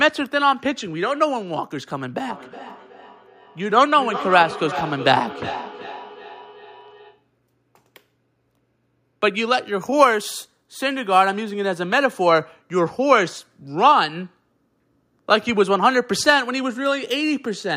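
From 2.25 s to 7.3 s the speech returns roughly every 0.4 s as feedback echo between two devices. One device replays the other's microphone feed, which is captured again, and neither echo canceller removes it. Repeats peak at about 12 dB below the speech, thinner and ringing.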